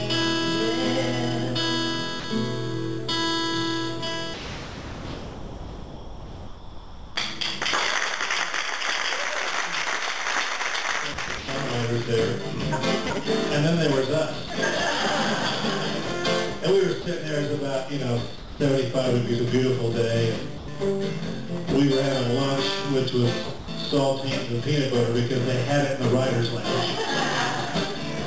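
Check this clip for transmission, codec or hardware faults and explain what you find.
Two kinds of voice-detector fault show up, heard through a G.722 call path that leaves nothing above 8 kHz.

Sound dropped by the voice detector, at 2.20–2.24, 4.34–7.16, 14.48–14.50, 17.02–17.06, 18.38–18.60, 20.58–20.68 and 23.58–23.68 s: the sender likely judged the sound to be background and stopped sending. Each gap becomes steady synthetic noise, and the one near 4.3 s lasts almost 3 s.

Sound chopped by the voice detector, from 11.14 to 11.48 s: sending switched on and off repeatedly, likely from detector indecision. About 160 ms became comfort noise, so the sound turns choppy.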